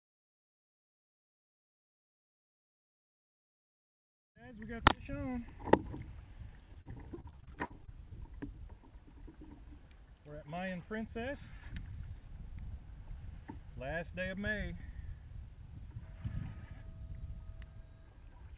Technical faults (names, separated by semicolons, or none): repeated packet loss (robotic sound)